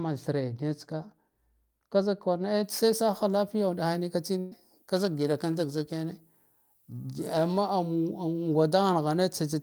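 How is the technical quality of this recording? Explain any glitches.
The speech has three technical faults.

From 2.64 s, just after "ka zik", to the end, pre-emphasis was left on: the treble boost, which fits the 75 µs FM curve, was never undone. High frequencies stand about 13 dB too strong at 10 kHz, making the speech thin, bright and sibilant.

At 4.39 to 4.53 s, a burst of packet loss forced the receiver to fill 119 ms by continuing and fading the last sound. This is heard as a held buzz or a fading hiss, and about 120 ms of audio is missing.

From 4.96 to 7.58 s, periodic clock jitter at around 1 kHz shakes the converter clock. It puts sidebands around every component, adding a rough, metallic edge that disappears in silence.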